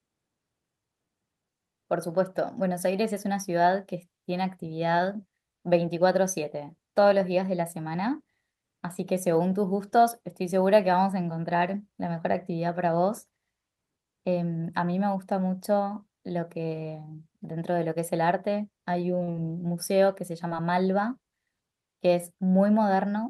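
At 19.23 s the speech breaks briefly with short concealed packet loss. About 40 ms of audio arrived too late for the decoder. The receiver filled the gap by extending the preceding sound, then blended back into the real signal. It comes across as a quick smear. A second, smaller loss follows at 20.47 s, about 20 ms long. The concealment there is briefer still, a brief wobble in the speech.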